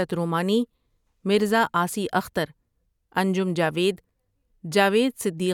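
No technical faults can be heard anywhere in this speech recording. There is nothing in it that calls for a timestamp or a diagnosis.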